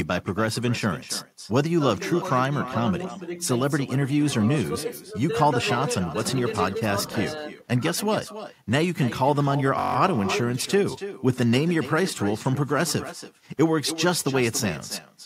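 From start to finish, every phrase is trailed by a fainter, thinner copy arriving about a third of a second later, sitting about 13 dB below the speech. This is echo with no canceller. The far end is playing the call through a loudspeaker, and its microphone picks that playback up and sends it straight back. Nothing removes the returning signal, so the speech comes back after the round trip through the network.

From 9.79 to 9.96 s, a steady buzz replaces the flow of speech. It is a single 21.33 ms fragment repeated 8 times at 46.9 Hz, giving a rough, mechanical drone. This is a system hang loop. The computer or audio driver stalled while the sound hardware kept cycling through the same ring buffer, and the loop length fits a 1024-sample buffer. Once it resumes, essentially no audio is missing.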